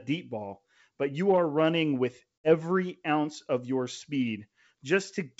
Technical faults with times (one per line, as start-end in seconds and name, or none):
2.40-2.52 packet loss on an ADPCM call